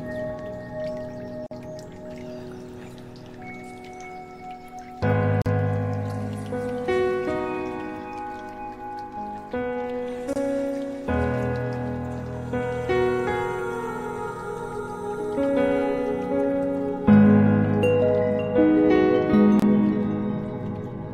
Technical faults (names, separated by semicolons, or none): gap at a join of encoded pieces